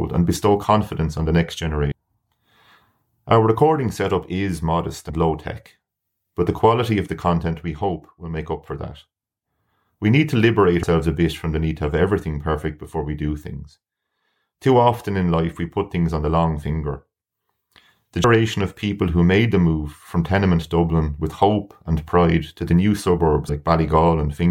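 At 1.91 s after "confidence on the next", 5.09 s, 10.82 s after "need to liberate", 18.23 s before "of people who made", and 23.48 s, compressed frames are skipped. The speech jumps ahead by roughly 100 to 300 ms, whole multiples of a 23.2 ms frame, leaving a brief smeared blip. The waveform and spectrogram show an abrupt splice with no sharp vertical click line.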